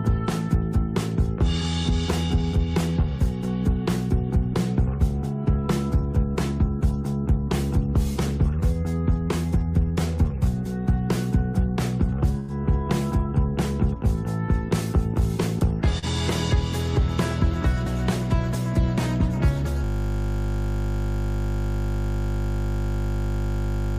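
The recording has three faults. At 12.39–12.51 s, a burst of packet loss drops about 80 ms. The receiver holds the last sound for 88 ms, fading it, then resumes further on. At 15.99–16.04 s, short concealed packet loss fills a 35 ms hole by extending the preceding sound, leaving a brief smear before the real audio returns. From 19.84 s to the end, a system hang loop repeats one 20 ms piece about two hundred times. It becomes a steady 50 Hz buzz.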